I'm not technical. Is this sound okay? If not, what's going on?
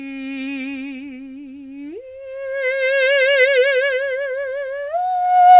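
Yes, nothing in this music sounds wrong.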